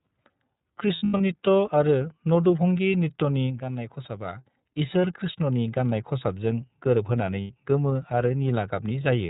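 iLBC codec damage runs through the whole speech clip: everything above 4 kHz is gone, and each frame is coded independently, leaving the voice clear but plainly rough and synthetic. The character fits iLBC's 13.33 kbps mode with 30 ms frames.

Lost iLBC frames come first at 0.96 to 1.21 s, where about 180 ms of audio drops out in pieces over 240 ms, the longest run about a tenth of a second. The decoder fills the gaps by repeating the last pitch cycle blended with noise, heard as a held, buzzy vowel. A second loss follows "कृष्णनि गाननाय खसाबजों गोरोबहोनानै" at 7.41 to 7.52 s, a 90 ms hold. In both cases the voice recovers almost immediately because each frame stands alone.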